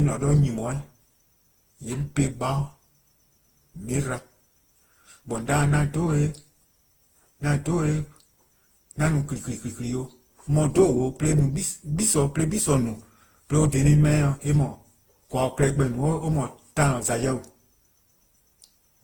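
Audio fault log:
throughout, generation loss: swirly, hollow, smeared speech with blurred onsets, likely from about ten Opus re-encodes near 48 kbit/s, each pass stacking fresh quantisation noise.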